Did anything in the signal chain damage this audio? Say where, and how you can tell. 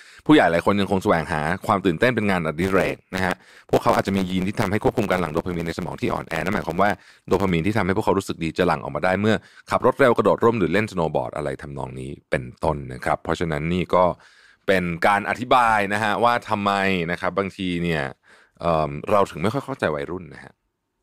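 Yes. From 2.61 to 7.51 s there is a block size mismatch (truncated) at the buffer stage. A 100 Hz buzz sits under the speech, and delivery runs about 1.09 times fast at normal pitch. Each block's tail is being discarded, one cut every 10 ms.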